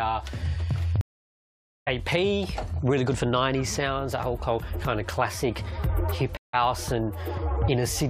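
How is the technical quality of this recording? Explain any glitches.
Two stream reconnects interrupt the recording. From 1.01 to 1.88 s the sound goes silent for about 0.86 s, and from 6.37 to 6.55 s for about 0.16 s. Each time the connection dropped, the player reconnected and started a fresh decoder mid-stream, so playback picks up later in the material, skipping roughly half a second the first time and about a tenth of a second the second. That forward skip distinguishes it from a simple dropout, which would resume exactly where it stopped.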